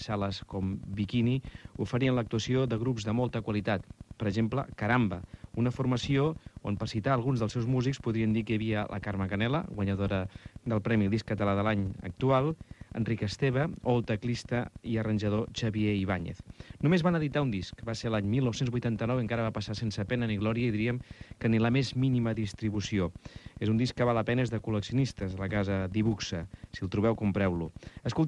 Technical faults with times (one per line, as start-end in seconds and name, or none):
none